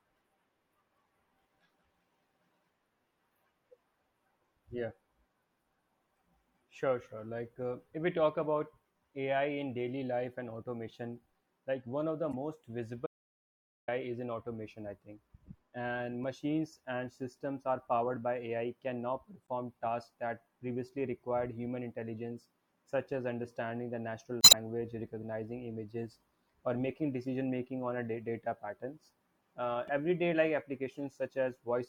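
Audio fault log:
12.32–12.34, 16.24, 19.47, 24.40–24.54, 29.87–29.89: damaged data in a compressed stream. Corrupted frames make the decoder lose sync, causing brief glitches; at 24.40 about 56.5 ms of extra sound appears.
13.07–13.88: audio dropout to silence. The sound cuts to dead digital silence for about 0.81 s, likely because the input was briefly lost while silence was recorded.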